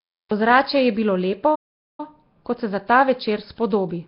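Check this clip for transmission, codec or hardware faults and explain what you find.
Three faults are present: heavy codec damage across the whole clip, a late start, and a mid-phrase dropout in this speech.

Nellymoser compression, throughout: a low-rate block codec, likely Nellymoser Asao at about 22 kbps, starves weak bands, leaving hissy, underwater-sounding speech.

Cut-off start, at 0.31 s: capture began late, so digital silence runs until 0.31 s and the speech enters abruptly, without attack, on "je bilo lepo kot".

Playback stall, 1.55 to 2.00 s: after "je bilo lepo" the sound drops out for 0.43 s, likely from the player starving for data, then resumes at "kot se".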